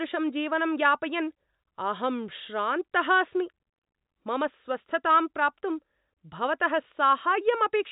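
No faults found in the speech; the band stops near 3.8 kHz, consistent with ordinary G.711 telephone coding at what sounds like a 64 kbps line.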